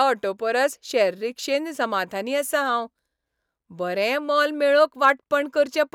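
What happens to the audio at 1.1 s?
Nothing goes wrong at 1.1 s; the speech continues intact through that moment, with no dropout, click or distortion.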